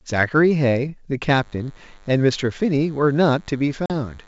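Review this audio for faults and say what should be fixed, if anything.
DECT cordless phone buzz runs from 1.35 s to the end: a faint, thin 100 Hz buzz, roughly 35 dB below the speech, from rectified DECT radio bursts. Move DECT handsets and bases away from the audio gear.

Packet loss on an ADPCM call hits 3.86 to 3.91 s. About 40 ms drops to silence, which points to a couple of lost packets, then the ADPCM decoder briefly mistracks. Use packet loss concealment and a jitter buffer.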